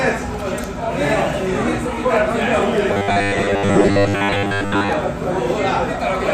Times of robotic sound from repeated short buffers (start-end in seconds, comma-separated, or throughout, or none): 2.93-4.90